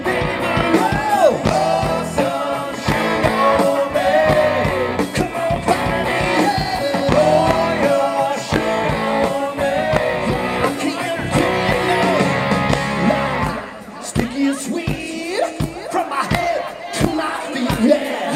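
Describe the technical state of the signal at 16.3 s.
At 16.3 s the signal is intact, with no audible fault at that moment.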